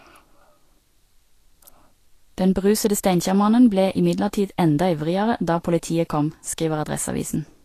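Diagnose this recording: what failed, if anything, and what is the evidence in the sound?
The fault sits at the codec stage and runs through the whole speech clip. Nothing reaches above 14.2 kHz. The treble that remains is hissy and grainy, and consonant onsets sound smeared. The damage is plainly audible from start to finish. The likely cause is Vorbis compression at a low bitrate, around 36 kbps. The encoder lowered its cut-off and quantised the upper residue so coarsely that fine detail turned into noise of similar energy.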